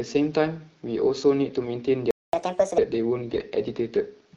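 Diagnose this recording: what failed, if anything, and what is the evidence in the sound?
AMR bit errors, a network fault decoded by the AMR-WB codec, turn the speech hoarse and gargly from 1.63 to 1.70 s and again, worse, from 3.28 to 3.45 s. Flipped low-priority bits misplace excitation pulses and skew gain and spectral values. A spectrogram shows smeared, noisy harmonics, while the waveform envelope stays roughly intact.

A playback stall cuts the sound dead from 2.11 to 2.33 s, a 225 ms gap that appears as a flat line on the waveform and a blank vertical band on the spectrogram. The likely cause is the player's buffer running dry or its thread blocking.

Catch-up at higher speed follows at the playback stage from 2.33 to 2.78 s. The player resamples its backlog at 1.5 times speed, raising pitch by about seven semitones. On the spectrogram the harmonics jump upward and spread apart, then drop back to normal spacing at 2.78 s.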